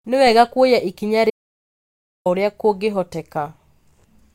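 At 1.30 s, just after "wega kuoya ikinya", an audio dropout to silence runs to 2.26 s: about 0.95 s of silence, likely a lost input link, with speech missing.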